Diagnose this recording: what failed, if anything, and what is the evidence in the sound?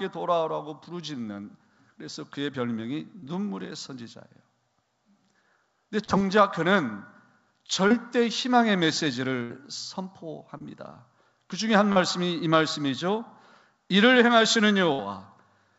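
Short concealed packet loss at 3.20, 6.04, 7.88, 10.58 and 11.92 s, at the network stage. About 30 ms went missing each time. The receiver bridged it by extending the preceding sound, heard as a brief smear or wobble before the real signal resumes.

Burst of packet loss at 9.43 to 9.52 s and 14.93 to 15.01 s, again in the network. Roughly 60 ms was lost in each. Concealment held the last sound as a fading buzz or hiss, and then the audio jumps ahead. The call codec's bandwidth stops at 8 kHz throughout.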